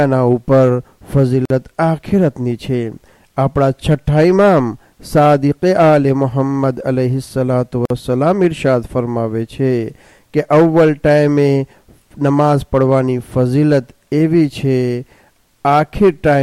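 A gap at a join of encoded pieces falls at 1.45 s and again at 7.85 s, each about 49 ms of silence. Separately encoded pieces were joined untrimmed, so encoder start delay and end padding remain, cutting continuous sound abruptly before it resumes unchanged.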